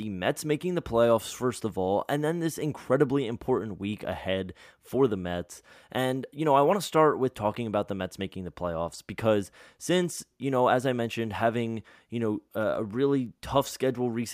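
At 8.99 s and again at 13.26 s the speech is interrupted by a single sharp tick, each a bit error spike lasting just one sample. In both cases a bit flipped in storage or on a digital link, so the sample value jumped by a power of two and returned immediately. With no relation to the surrounding signal, each tick is a broadband click spread across the whole spectrum.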